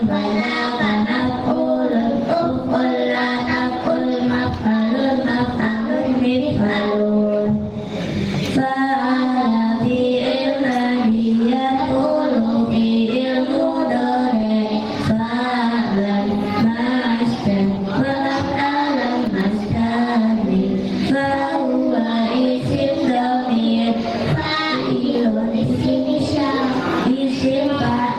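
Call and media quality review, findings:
Gain pumping, throughout the clip. Level swings by around 10 dB, with loud and soft passages squashed toward one level.

Likely cause: input gain set far too high at the mic stage, with a fast limiter or compressor clamping each peak and releasing between them.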